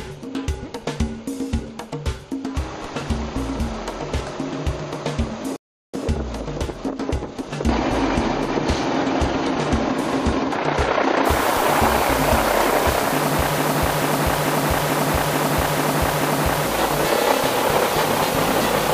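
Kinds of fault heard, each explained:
rebuffering stall: At about 5.56 s the sound drops abruptly to silence, and at about 5.94 s it picks up exactly where it left off, with nothing skipped. The gap is about 0.37 s of added time. This is what happens when a player empties its store of downloaded audio and has to wait for more data to arrive before it can continue. The content is intact but arrives later than it should.
low bit depth with dither: From about 11.26 s to the end, a constant, even hiss sits under the audio. It is loud, only about 10 dB below the signal, yet there is no harsh or gritty distortion. That points to a word length of around 5 bits with dither added before rounding. The dither turns what would be ugly quantisation error into steady white noise, trading distortion for audible hiss.
broken-record loop: Between about 13.58 s and 16.66 s, a single fragment of about 0.44 s plays over and over, back to back and identical each time, seven times in a row. 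It sounds like a skipping record. The likely cause is a player, encoder or stream that stalled and kept resending the last piece it held. Whatever audio should have filled those three seconds is gone rather than delayed.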